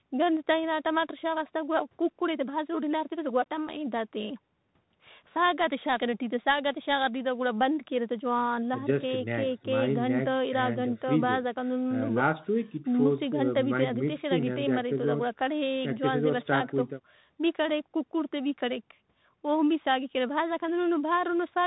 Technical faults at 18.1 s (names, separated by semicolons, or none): Bluetooth CVSD headset codec